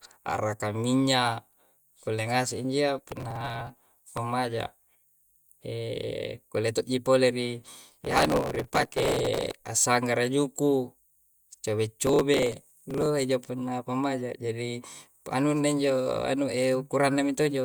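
Processor overload crackle occurs three times in this speech: from 2.98 to 4.18 s, from 8.01 to 9.58 s, and from 12.07 to 13.06 s. The processor repeatedly fails to deliver its tiny buffers on time, and each missed block is skipped. The dense grit points to blocks of roughly 1.5 ms. The result is a gritty tearing layered over the speech. It is heaviest in the second burst, with several hundred dropouts, and lightest in the third.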